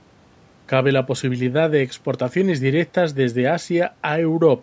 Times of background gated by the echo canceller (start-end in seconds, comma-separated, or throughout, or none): none